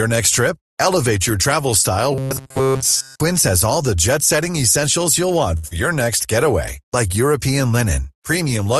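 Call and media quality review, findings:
Robotic sound from repeated short buffers, 2.12 to 3.20 s: rigid metallic buzz at 133 Hz that still roughly tracks the speech. Likely cause is playout starved of new audio, repeating a segment of about 7.5 ms (one over 133 Hz) over most of the stretch while real audio is skipped. Unlike concealment, the pitch stays fixed for over a second instead of continuing the talker's own.

Short stall from a late packet, 5.57 to 5.66 s: a sound held too long, with a slight buzz or dip. The jitter buffer ran dry and stretched the last audio for 62 ms until the packet arrived, then resumed in place. Nothing is lost, but delay rises by 62 ms. The audio pauses and resumes rather than jumping ahead.

Short concealed packet loss, 5.68 to 5.73 s, right after the stall: brief smear or wobble. About 60 ms never reached the decoder in time, and 32 ms of continued last sound bridged the gap before blending back. 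Unlike the stall, audio is actually missing. Delay drops by about 30 ms as playout catches up. The codec path's top end stops at 12 kHz throughout.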